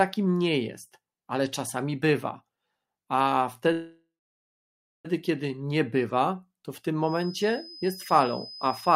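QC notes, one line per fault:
3.72–5.06 s, call audio freeze: about 1.3 s inserted, a fading tail then roughly a second of flat waveform, resuming intact at "kiedy nie bywa to"; likely jitter-buffer underrun.
6.99–8.96 s, feedback whistle: a thin 5 kHz tone at one pitch, slowly swelling and fading, about 20 dB under the speech, a single horizontal spectrogram line, likely a loop near feedback.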